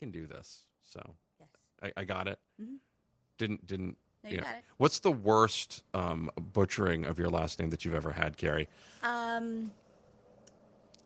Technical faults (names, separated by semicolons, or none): automatic gain rising